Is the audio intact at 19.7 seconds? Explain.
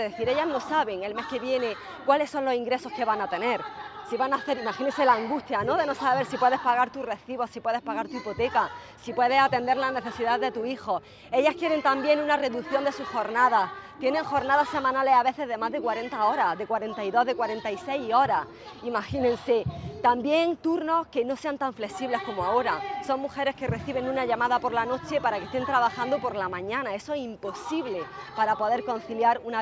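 Yes, the audio is intact at 19.7 seconds, with no dropout, click, distortion or other fault at that point.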